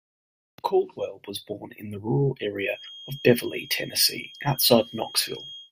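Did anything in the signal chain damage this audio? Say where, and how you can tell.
Yes. A feedback whistle enters at 2.66 s, just after "born in the rural", and holds to the end: a thin 3.2 kHz tone well below the speech, swelling and fading slowly in level. On a spectrogram it's one horizontal line; the likely cause is a loudspeaker-to-microphone loop sitting at the edge of feedback.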